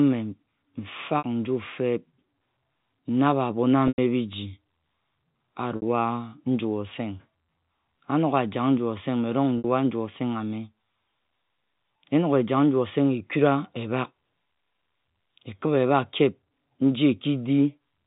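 Packet loss with pitch repetition at 1.18 s (before "nju feb"), 3.88, 5.76 and 9.58 s: 60 ms gaps, 100 ms at 3.88, patched with a repeated, buzzy pitch period.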